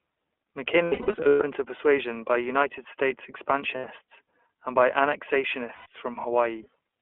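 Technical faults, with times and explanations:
throughout, iLBC codec: the speech sits in a narrow telephone band of roughly 300 Hz to 3.4 kHz, with nothing above. Plainly audible coding damage gives it a rough, slightly synthetic edge. This fits iLBC's 15.2 kbps mode with 20 ms frames. Each frame's excitation is coded on its own, without drawing on the previous frame, which trades smoothness for robustness.
0.84–1.42 s, 3.75–3.85 s and 5.74–5.86 s, lost iLBC frames: in the first span, about 420 ms of audio drops out in scattered bursts over 560 ms. The longest run is around a tenth of a second, and the span ends just before "to persuasion by". The later gaps last 80 ms and 120 ms. The decoder fills each gap by repeating the last pitch cycle mixed with noise, which sounds like a held, buzzy vowel. The voice recovers almost at once because each frame decodes independently.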